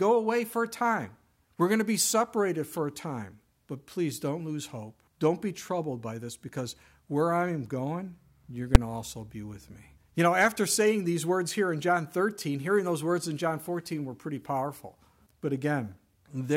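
At 8.75 s a single sharp bang marks invalid numbers at full scale: a calculation produced infinite or invalid values that were forced to the maximum level for about 5.8 ms, which fits a 256-sample block. Unlike a clipping burst or a dropout click, the whole block sits pinned at the limit, so the short run collapses into one loud, flat-topped pop rather than a distorted stretch or a brief silence.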